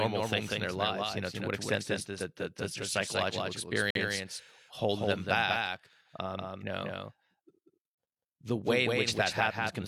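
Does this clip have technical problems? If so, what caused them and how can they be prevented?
Yes. A doubled audio track runs through the whole clip: a second full-band copy of the speech trails the first by about a fifth of a second, a few dB quieter, with no decay or room colour. This likely comes from the same signal being captured twice, once through a slower path, or from an edit leaving two misaligned copies. To prevent it, route each source through only one capture path and mute or delete duplicate tracks before mixing.

A gap between stream segments occurs from 3.90 to 3.95 s. A hole of about 48 ms of silence with hard edges cuts into the speech where two segment time stamps fail to meet, which fits a segment boundary near 4 s. No audio is lost, because the player inserts silence rather than dropping anything. To prevent it, keep segment time stamps continuous so that each segment begins exactly where the previous one ends.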